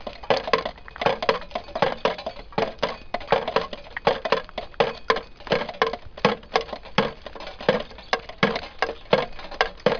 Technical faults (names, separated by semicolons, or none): none